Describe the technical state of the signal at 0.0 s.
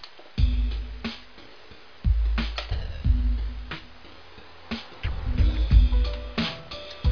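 At 0.0 s the signal is intact, with no dropout, distortion, clipping or other fault audible at that point.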